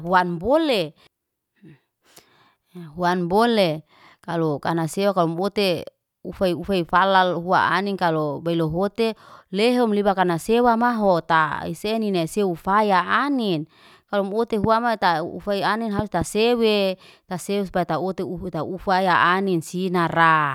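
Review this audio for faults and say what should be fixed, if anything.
Three loud pops sit on top of the speech: a single one at 14.64 to 14.66 s, then a double at 15.99 to 16.24 s, each roughly 15 dB above the signal. The likely cause is a voltage step from a connector, switch or static discharge, shaped by the following circuitry. Secure cables and ground the equipment properly before recording.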